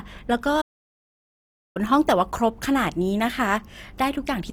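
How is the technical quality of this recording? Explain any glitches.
The technical quality is poor. Two problems stand out: a coarse, compressed sound throughout and a long silent gap near the start.

Throughout the clip the speech has a grainy, rough texture. This is most likely Opus compression in its music-oriented CELT mode. The encoder keeps each band's overall energy. When bits run short, it fills the missing detail with noise or folded copies of lower bands. The damage is plainly audible, which fits a low rate around 24 kbps. The bandwidth stays full.

From 0.61 s to 1.77 s the audio cuts out mid-flow. It stays silent for about 1.14 s. This is a playback stall. The player was likely starved of data, or its thread was blocked, so nothing reached the output. Once it recovered, sound resumed. The break is long enough to interrupt the flow of the speech.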